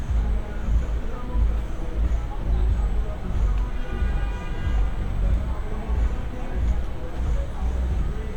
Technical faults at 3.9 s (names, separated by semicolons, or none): USB whine